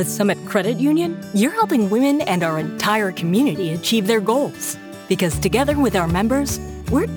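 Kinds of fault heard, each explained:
Sample clock jitter: from 1.68 s a hiss and roughness ride on louder, brighter passages, since the converter clock wanders by around ten microseconds, leaving errors roughly 25 dB down.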